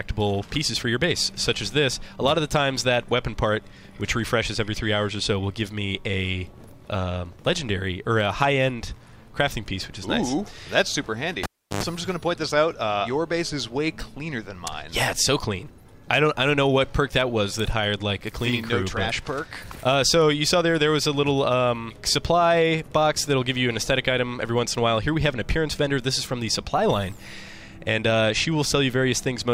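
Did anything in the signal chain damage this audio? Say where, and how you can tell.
Yes. The damage is in the analogue wiring: a cable pulled and plugged in at 11.43 to 11.83 s. A pop opens about 350 ms of near silence. Within it comes roughly 100 ms of 50 Hz mains buzz as the tip alone makes contact. A second pop brings the sound back.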